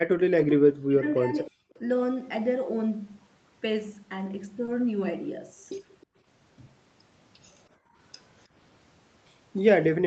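From 0.31 to 1.57 s the speech dips sharply, in pieces adding up to about a second. At its deepest it falls by roughly 40 dB, close to silence. This is speech suppressed in double talk, likely caused by someone on the far end talking at the same moment. The echo canceller could not tell this talker from its own loudspeaker echo. So it pulled everything down. The voice fades and returns in broken stretches.

At 1.71 to 1.78 s a faint, delayed copy of the voice slips through. It trails the original by 312 ms and sits far below the speech, around 35 dB down. This is an echo leak. The far side likely plays the call on a loudspeaker, and its echo canceller did not fully remove what its microphone heard. The leftover was sent back. A second brief leak, with the same delay and level, appears at 6.01 to 6.06 s.

At 4.65 to 4.69 s there is a short concealed packet loss. About 20 ms of audio never arrived in time. 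The receiver filled the gap by extending the last sound, then blended back into the real signal. It is heard as a tiny smear or wobble.

From 7.77 to 7.97 s the room sound drops, for about a fifth of a second. The deepest dip is about 16 dB. This is background gated by the echo canceller. While the loudspeaker played, the canceller clamped the microphone down hard. The background then comes back once it releases. Throughout, the audio stops at 8 kHz, the band limit of the call path.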